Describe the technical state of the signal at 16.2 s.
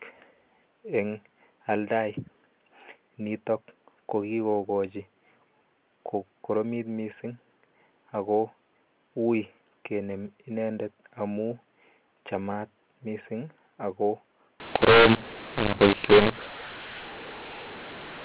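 At 16.2 s the signal is in a stretch of mu-law and A-law mixed up. It runs from 14.6 s to the end of the clip. The telephone speech was coded with A-law but is being decoded as mu-law. The two logarithmic curves disagree, so sample levels get remapped wrongly. Some come out too loud and others too soft. The quietest samples jump well above silence. The speech sounds harsh and gritty, and the gaps between phrases fill with noise.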